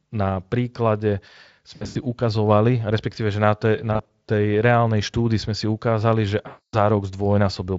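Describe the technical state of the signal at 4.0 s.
At 4.0 s there is VoIP packet loss concealed by the speech codec, from 3.93 to 4.13 s, just before "tej reálnej štúdy sme". Four 20 ms frames drop out, scattered over about 160 ms, and the decoder extrapolates them into short buzzy or noisy, fading patches. On a spectrogram these show as smeared, decaying harmonics.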